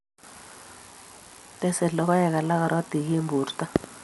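It's a speech clip, dull the whole way through with nothing above 11.4 kHz and rough, fluttering noise around tones, likely Dolby Digital compression at something like 64 kbps.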